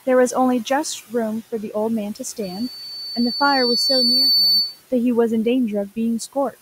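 Noise suppressor artifacts run through the whole speech clip. The suppressor estimates which frequency bands hold steady background and pulls them down frame by frame, by about 14 dB here. The room noise, sitting about 20 dB below the speech, drops away in the gaps and comes back up under each phrase.

From 2.42 s to 4.83 s a loudspeaker feedback squeal appears. The microphone is picking up the loudspeaker it drives, and at 4.5 kHz the loop gain exceeds unity, so that one frequency keeps reinforcing itself. It begins as a faint pure tone and swells over roughly two seconds. At its peak it sits a few decibels above the speech as a piercing high whistle, then stops at 4.83 s.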